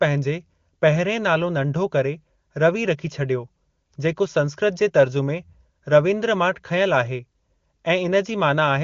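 Speech, with nothing technically wrong to report. It carries the character of AMR wideband (HD Voice) coding, band-limited to about 7 kHz, with at most faint codec traces, which fits the top 23.85 kbit/s mode.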